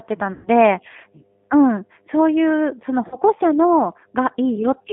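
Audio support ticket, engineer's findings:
Mains hum, continuous: steady 50 Hz tone roughly 30 dB under the signal, from a ground loop or transformer coupling power-line current into the audio path.

G.729 codec, throughout: rough, synthetic speech, band limited to 200 Hz–3.5 kHz. Fits an 8 kbit/s codec rebuilding speech from filter, pitch and sparse pulses.

VoIP packet loss concealed by the speech codec, 0.33–0.48 s and 3.08–3.16 s: buzzy or noisy, fading smear. The decoder extrapolates from its last frame across roughly 120 ms and 40 ms gaps, and speech stays weak briefly after the gaps.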